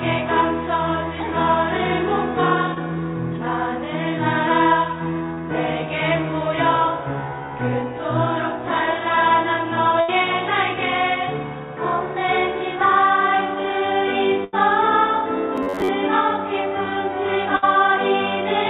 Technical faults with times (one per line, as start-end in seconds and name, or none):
2.74-2.79 short concealed packet loss
5.35-5.39 short concealed packet loss
10.01-10.10 burst of packet loss
14.44-14.55 burst of packet loss
15.56-15.90 robotic sound from repeated short buffers
17.57-17.64 burst of packet loss